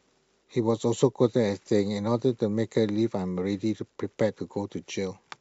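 No technical faults can be heard anywhere in the speech. There is nothing in the audio to place on a timeline or trace back to a cause.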